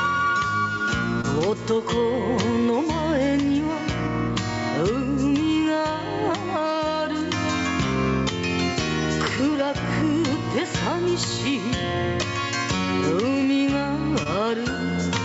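Input gain was likely set far too high, so a fast limiter clamps each loud sound. This gain pumping swings the level by around 15 dB, and everything sounds squashed. Short concealed packet loss follows at 1.21 to 1.25 s and 14.23 to 14.27 s. About 20 ms of audio arrived too late and was patched by extending the preceding sound, leaving a brief smear or wobble. The call path cuts off everything above 8 kHz.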